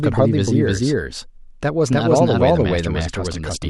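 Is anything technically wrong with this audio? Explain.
Yes. A doubled audio track runs through the whole speech clip. A second, full-band copy of the speech trails the original by roughly 300 ms at about the same level, so every syllable is heard twice, a distinct slap rather than reverb. The copy carries no decay or room colouring, which points away from an acoustic echo. The likely cause is the signal being captured again through a slower path, or an edit leaving two out-of-step copies mixed together.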